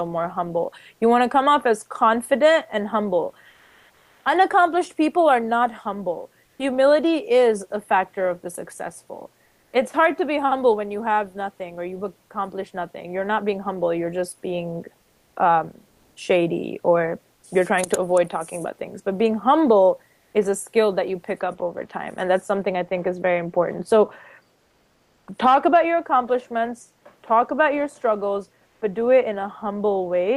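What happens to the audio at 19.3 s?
At 19.3 s the clip is inside a stretch of comfort noise in place of the background, running from 15.89 to 20.33 s. The real background gives way to steady, featureless synthetic noise, likely from discontinuous transmission such as Opus DTX, until the sound resumes.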